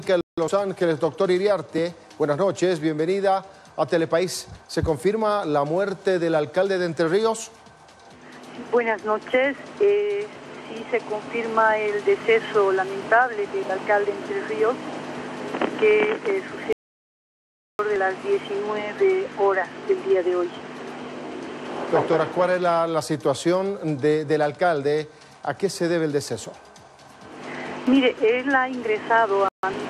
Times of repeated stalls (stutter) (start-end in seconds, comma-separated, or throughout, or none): none